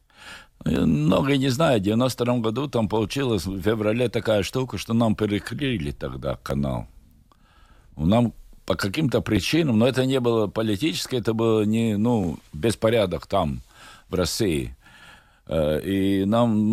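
Clock drift buffer slips occur from 0.76 to 15.11 s: about seven clicks through the speech, one every 2.86 s. The likely cause is two devices on separate clocks, off by roughly 500 ppm, so roughly seventy samples are periodically dropped or repeated.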